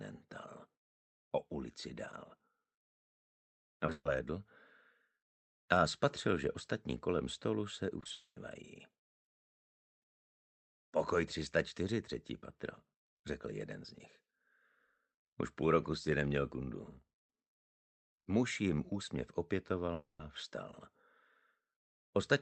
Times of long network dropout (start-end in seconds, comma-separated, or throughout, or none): 8.12-8.37, 19.93-20.20